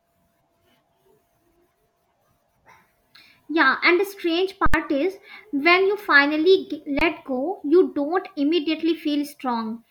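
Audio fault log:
4.66–4.74 s, underrun with held sample: the output buffer ran dry and the converter froze on its last value for 75 ms, flattening the sound. About 70 ms of live audio was lost.
6.99–7.01 s, underrun with held sample: a 23 ms (1024-sample) starvation holds the waveform flat. About 20 ms of audio goes missing, and it comes back in just before "go you don't".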